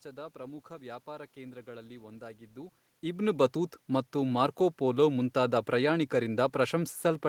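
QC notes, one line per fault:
No faults found in this speech recording.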